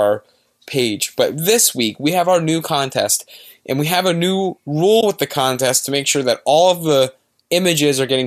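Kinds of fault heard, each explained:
AAC frame loss with muting: a soft-faded 20 ms hole right after "we have a new", which fits two lost frames the decoder zeroed.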